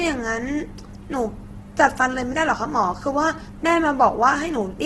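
A speech recording with heavy codec damage throughout. Nothing is present above 12.1 kHz. The voice sounds rough, grainy and noisy, with little swirl. The likely cause is Opus compression in its music mode, at a rate that suggests about 12 kbps.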